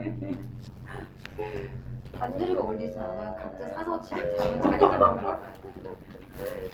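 From start to end, the frames used to reassemble the audio overlap in a way that never sums to a steady gain, an overlap-add ripple. The level pumps by about 11 dB roughly a hundred times a second, giving the sound a rough, buzzing, robotic flutter.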